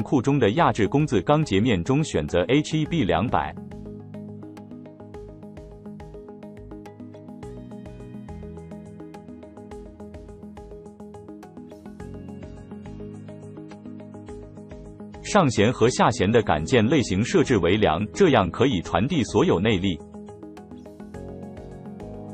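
Partway through, the adaptive stream dropped to a lower bitrate, most likely because the connection slowed, and the player switched to a leaner encoding for about eight seconds, from 12.34 s to 20.34 s. The change is abrupt and leaves no gap. The treble vanishes above about 11.4 kHz and codec artefacts thicken, which points to a switch from roughly 128 kbit/s MP3 down to around 32 kbit/s. The original bandwidth returns just as suddenly at 20.34 s.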